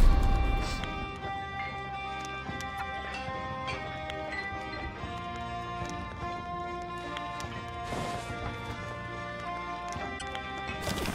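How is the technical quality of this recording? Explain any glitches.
Two brief glitches come from damaged data in a compressed stream, at 2.79 to 2.81 s and at 10.15 to 10.22 s. Corrupted bytes break the frames there. The decoder misreads them, loses sync and hunts for the next valid frame header. Each fault sounds like a short chirp or blip.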